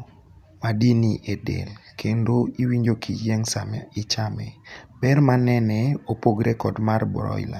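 No technical faults can be heard in this recording.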